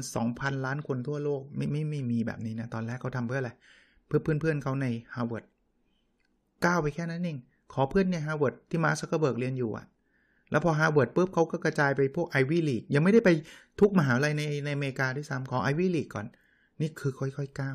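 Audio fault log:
No fault is logged for this speech clip.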